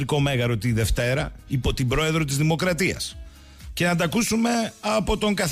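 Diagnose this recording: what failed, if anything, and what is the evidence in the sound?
Nothing in the signal chain shows a failure, with no audible dropouts, distortion, level jumps or timing disturbances anywhere in the recording.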